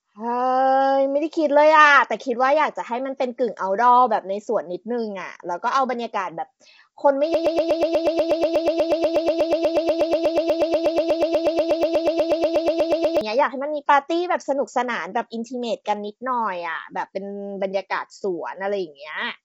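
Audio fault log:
throughout: low-delay AAC compression. The sound is rough and grainy with nothing above 7.8 kHz, likely from AAC-ELD's short frames starved of bits, which fits roughly 24 kbps.
7.34 to 13.21 s: broken-record loop. A 121 ms fragment repeats exactly, back to back, for nearly six seconds, likely a stalled stream resending its last fragment while the real audio is lost.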